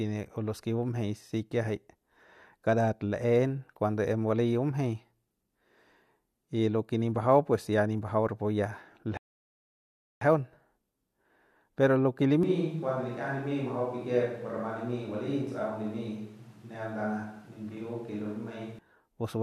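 At 9.17 s the player exhausts its downloaded audio and halts until more data arrives, a rebuffering stall. The speech drops to silence until 10.21 s, then picks up exactly where it stopped, so nothing is missing but about 1.04 s is added.

From 12.43 s to 18.79 s the recording likely switches to a distant microphone in place of the close one. The speech abruptly turns roomy and hollow, thinner in the bass and about 5 dB quieter, with room noise roughly 30 dB below it, before snapping back.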